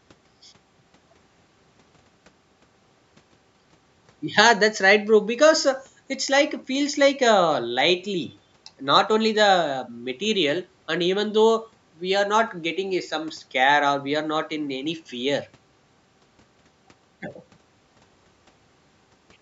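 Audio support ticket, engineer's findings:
No faults found in this speech recording. Call microphone processing is audible as expected, with the lowest bass rolled off and nothing above 8 kHz.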